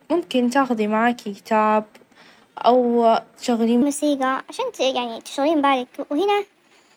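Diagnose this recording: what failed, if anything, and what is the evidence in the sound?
A section at the wrong speed begins at 3.82 s and runs to the end: the speech abruptly plays 1.26 times faster and about four semitones higher. The likely cause is playback or editing on a mismatched clock. Pitch and tempo jump together, unlike a pitch-shift effect.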